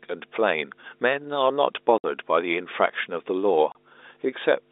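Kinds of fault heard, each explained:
Mains hum: A steady low drone at 50 Hz runs under the speech for the whole clip, nearly as loud as the talker, with low harmonics stacked above it. It comes from the power line leaking into the signal path, most plausibly through a ground loop or a transformer close to the cabling. Because the drone never changes with what is said, it sits there even in pauses.
Packet loss filled with silence: The speech drops out abruptly twice, for 60 ms starting at 1.98 s and for 30 ms at 3.72 s. Stretches of audio never arrived, and the receiver played dead silence in their place. The gap lengths point to 30 ms packets, with two lost back to back in the first hole and one in the second.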